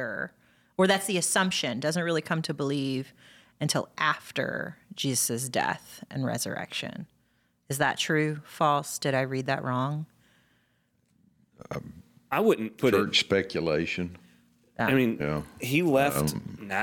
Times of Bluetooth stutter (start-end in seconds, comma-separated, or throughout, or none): none